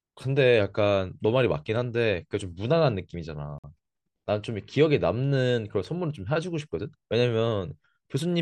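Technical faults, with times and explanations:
3.58 to 3.64 s, Bluetooth stall: the speech cuts to complete silence for about 53 ms, then carries on. A gap like this is likely a stall on the wireless link, where radio interference delayed packets until the headphones' buffer emptied and playback paused until the resent data arrived. Unlike codec packet-loss concealment, nothing is synthesised to paper over the gap. The output simply falls silent.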